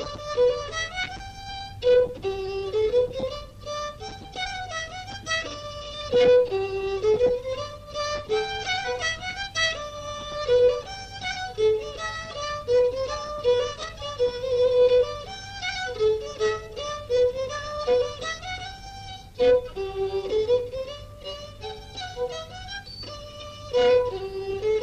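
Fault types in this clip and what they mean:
No faults are audible.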